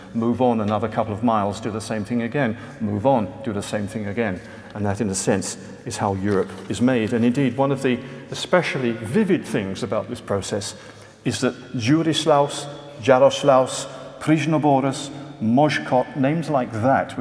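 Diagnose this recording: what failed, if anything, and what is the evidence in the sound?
Nothing failed: no stage in the chain, from analogue wiring and conversion through buffering, processing, transmission, storage or playback, leaves any audible trace of a fault anywhere in the recording.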